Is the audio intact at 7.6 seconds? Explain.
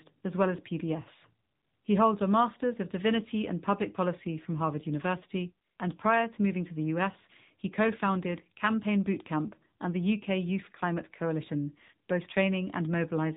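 No. At 7.6 seconds, as throughout the clip, AMR narrowband mobile codec damage is audible. The speech is rebuilt from a vocal-tract model driven by sparse pulses, with nothing above 3.8 kHz, giving a muffled, buzzy, synthetic tone consistent with a low bitrate near 8 kbps.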